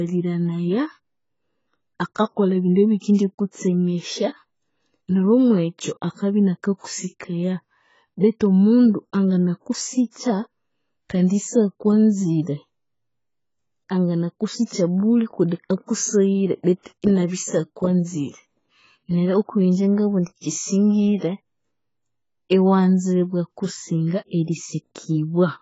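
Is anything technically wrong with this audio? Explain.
Yes. Throughout the speech there is likely heavy AAC compression. An AAC-LC encoder short of bits, consistent with roughly 16 kbps, quantised the spectrum coarsely and discarded everything above 7.6 kHz. The sound is dull and smeared, with fizzy sibilants and a warbling texture on sustained sounds.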